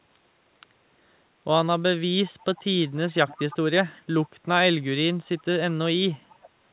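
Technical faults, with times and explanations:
0.13–0.19 s, 2.42–2.64 s, 2.95–3.57 s, 5.38–5.44 s and 6.34–6.49 s, echo leak: a faint, separate copy of the speech returns about 356 ms after the original every time, barely audible in the short scraps and clearest from 2.95 s, where it sits only around 20 dB below the speech. The likely cause is a far-end loudspeaker echo canceller letting residue through. Unlike room reverberation, it is a discrete repeat at a fixed delay rather than a smooth decaying tail.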